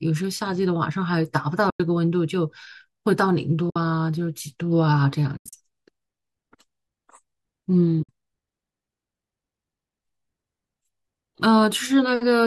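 The speech drops out four times from AAC frame loss with muting: at 1.70 to 1.80 s for 100 ms, at 3.70 to 3.76 s for 60 ms, at 5.37 to 5.53 s as broken gaps scattered over 160 ms with the longest run about a tenth of a second, and at 8.03 to 8.09 s for 60 ms. The decoder zeroed the missing frames, whose short length fits low-delay AAC. The overlapping windows fade the sound out and back in, so each gap is a soft-edged hole. A spectrogram shows clean vertical blank bands across all frequencies, and the waveform tapers smoothly to silence and back.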